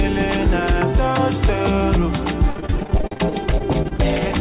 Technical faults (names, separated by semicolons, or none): repeated packet loss (robotic sound)